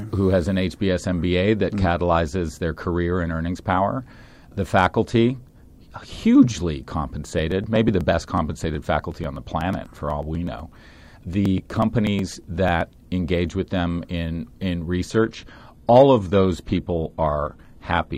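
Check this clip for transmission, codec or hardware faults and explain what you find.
Two faults can be heard in this speech recording: a run of regular dropouts in the middle and a drop in stream quality near the end.

Periodic USB or driver dropouts, from 7.39 s to 12.81 s, ending just before "engage with them in". At a steady interval of 0.123 s, a brief slice of audio of roughly 2 ms is skipped. Around fifty of these small losses occur, which fits a background task repeatedly stalling the USB bus or audio driver. Each skip leaves a small tick in the speech, and the ticks form an even, rapid rhythm.

Adaptive stream at a lower bitrate, from 15.14 s to the end at 18.18 s, starting right after "with them in in". The sound changes suddenly, with no gap, which points to the stream switching from roughly 96 kbit/s AAC to a low-rate HE-AAC version near 20 kbit/s as the connection slowed. Nothing above 14.9 kHz remains, so the treble is audibly duller, and the speech takes on the coarser quality of heavier compression.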